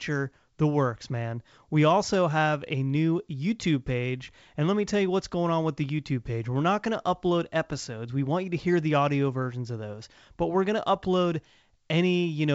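No technical faults are audible.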